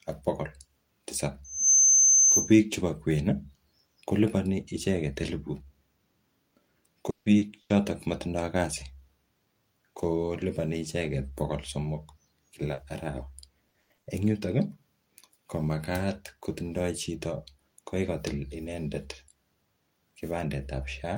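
Speech carries several faults. From 1.44 to 2.59 s there is a loudspeaker feedback squeal. A single tone at 6.2 kHz swells over roughly a third of a second and rings about 10 dB above the speech. The microphone is hearing its own loudspeaker, and the loop gain runs above one at that pitch. At 7.10 s the sound is stretched into a fading buzz or hiss for 160 ms. A brief silence follows, and the audio resumes at 7.29 s with that stretch gone. A long network dropout is the likely cause. Short concealed packet loss appears at 7.38 s and again at 12.74 s. Each is a 40 ms smear where missing audio was patched by extending the previous sound and then blending back. From 7.62 to 7.73 s a burst of packet loss leaves 80 ms missing. The last sound is held and dims before the speech picks up further on. Between 13.70 and 14.09 s, repeated packet loss (robotic sound) sets in. Four gaps, the longest 80 ms, mean about half that span is patched rather than real. 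The result is choppy.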